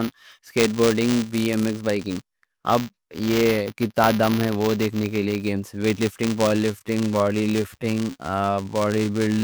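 A speech clip with buffer tearing running from start to finish. It comes through as a steady robotic buzz at 200 Hz, present only while there is sound. That rate points to a buffer period of 5 ms. The writer and the reading hardware have slipped against each other. In every period, a small slice of the buffer still holds audio from about 10 ms earlier. Hard joins on both sides of that slice produce the rattle. From 6.44 s to the end, just after "ویٹ لفٹنگ", there is a time-stretched section. The pace drops abruptly to 0.69 times normal speed while the pitch stays the same. The likely cause is software lengthening this part to fill a set duration by repeating short pieces of the audio.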